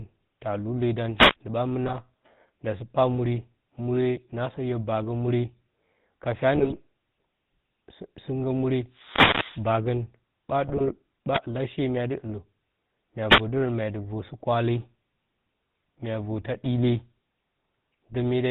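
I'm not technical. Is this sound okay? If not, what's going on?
No, it has three separate problems.

The whole clip runs through the GSM full-rate codec, the original mobile-phone speech coder, and the damage is easy to hear. It rebuilds the speech from a rough model of the throat and mouth, fed with a coarse, thinned-out pulse signal. Everything above 4 kHz is gone, so the speech sounds muffled, buzzy and gravelly from start to finish.

There are also four wireless microphone noise hits: from 1.15 to 1.36 s, 8.89 to 9.71 s, 11.32 to 11.40 s, and 13.29 to 13.41 s, just before "dərə mya dɨ". Each is a swish or burst of static. The radio signal from the mic momentarily faded, so hiss from the receiver rose. The one around 9 s is the longest, nearly a second.

Finally, there are GSM bit errors at 1.86 to 1.98 s, 6.54 to 6.74 s, and 10.68 to 10.97 s. Here the phone link was weak and some of the data got scrambled before decoding. 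The decoder then rebuilt the sound from wrong settings, so you hear short squawks, pops and a gargling quality for a fraction of a second each time.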